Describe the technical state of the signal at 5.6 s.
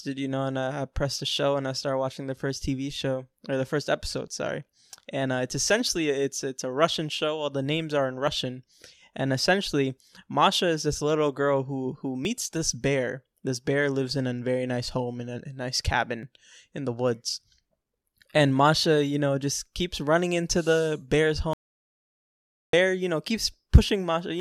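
At 5.6 s the speech signal is intact, with no dropout, clipping, glitch or other technical fault at that point.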